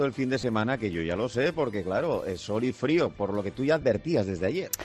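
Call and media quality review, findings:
Lost LE Audio frames at 0.42–0.44 s and 3.81–3.83 s: brief noisy smear, about 15 ms each, consistent with two lost frames. Probable component: Bluetooth LE Audio link. The LC3 decoder concealed each gap by repeating the last spectrum with randomised signs. Light lossy compression in the path, faint at most.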